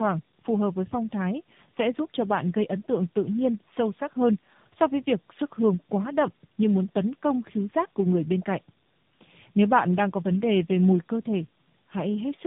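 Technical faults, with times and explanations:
Throughout: tandem speech coding. The speech sounds rough, muffled and warbly. It seems to have passed through three different speech codecs in a row, the last likely AMR-NB. Each coder reworks the previous one's damage, so the artefacts stack. Nothing remains above 3.7 kHz.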